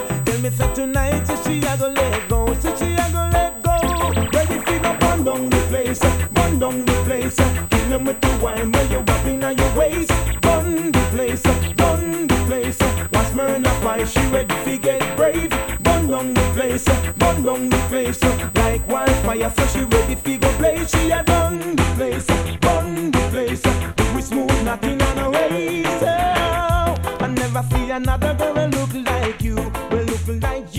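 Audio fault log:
0.00–21.55 s, USB whine: a fixed-pitch tone at 8 kHz, strongest at its 16 kHz harmonic and sitting roughly 15 dB below the audio, which fits current drawn in 125-microsecond USB microframes leaking into the power or ground path.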